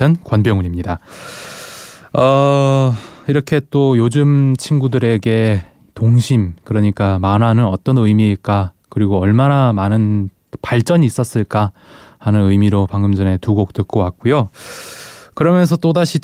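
Nothing technical goes wrong anywhere in this bit of speech; there's simply nothing to flag.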